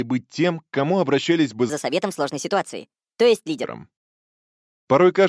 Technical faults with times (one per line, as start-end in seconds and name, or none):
1.70-3.64 wrong sample rate